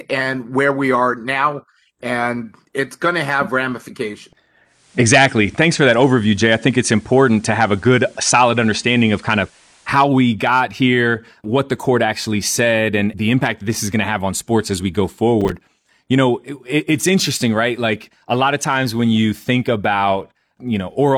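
From 4.64 to 10.14 s, faint hiss rises well below the speech and level shifts about 2 dB: digital radio blending to analogue FM, with quick 286 ms crossfades. From 15.41 to 15.61 s a brief gritty crackle tears through the speech: processor overload crackle, with roughly seven missed buffers of about 5 ms each, each leaving a short silent gap.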